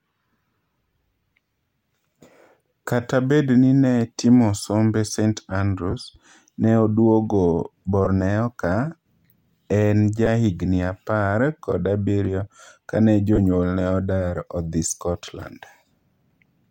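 Lost LE Audio frames at 5.91 to 5.94, 8.05 to 8.07, 10.26 and 13.36 to 13.39 s: dropped Bluetooth packets made the LC3 decoder repeat its last spectrum with scrambled phase, leaving brief noisy smears in the speech.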